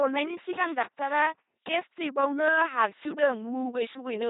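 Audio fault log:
Throughout: LPC-10 vocoder. The speech has been rebuilt by a very low-rate parametric coder, here at 2.4 kbit/s, which keeps only a short set of vocal tract filter settings and drives them with either a buzzy pulse train or noise, deciding each moment is fully voiced or fully unvoiced. That gives a heavily damaged, mechanical robot voice, with stray buzz or hiss where the voicing call goes wrong, and nothing above 3.8 kHz.
0.44 to 1.60 s: loose connector crackle. For just over a second, an irregular burst of scratching and crackle runs through the speech. A worn or dirty contact is making and breaking rapidly as it shifts, chopping the signal on and off in uneven bursts, and each break and remake jumps the level abruptly, producing the clicks.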